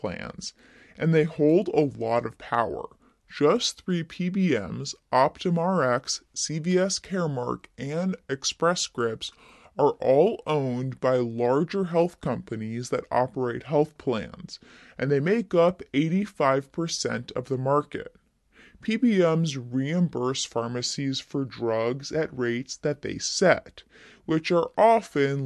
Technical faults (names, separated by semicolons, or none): wrong sample rate